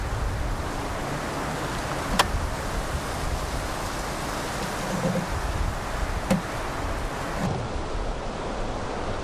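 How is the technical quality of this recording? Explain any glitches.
The recording has one clear fault in its closing seconds. From 7.47 s to the end at 9.24 s there is a wrong sample rate. The samples are played back more slowly than they were captured, with no rate conversion, so speed and pitch drop together. The audio runs at about 0.73 times normal speed and sits about 5.5 semitones lower. That ratio fits material recorded at 44.1 kHz being played at 32 kHz, and it makes the final stretch sound lower and slower.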